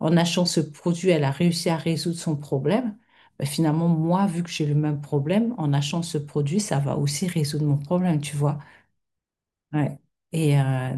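No technical faults can be heard anywhere in the recording.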